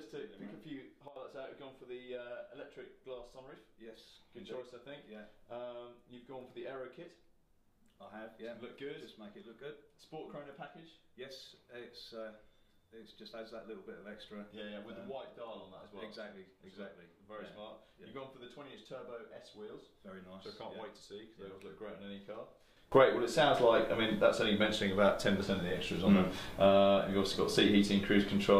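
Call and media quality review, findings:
Sudden gain jump: level and noise floor step together at 1.08–1.16 s (about 12 dB down) and from 22.92 s onward (about 20 dB up). The waveform shows vertical envelope edges. Likely an unramped digital gain setting.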